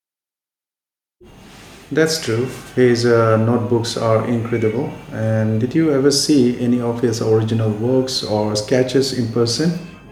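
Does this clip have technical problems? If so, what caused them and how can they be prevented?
No, the speech signal shows no technical faults anywhere in the recording, so there is nothing here that needs preventing.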